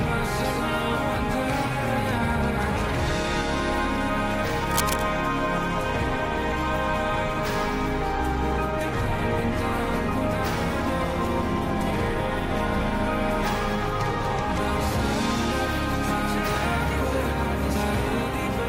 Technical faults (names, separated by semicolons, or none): cable scratch noise